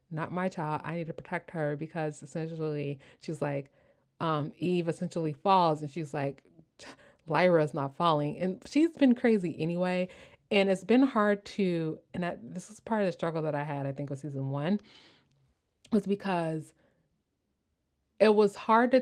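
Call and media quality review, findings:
No faults found in this speech clip.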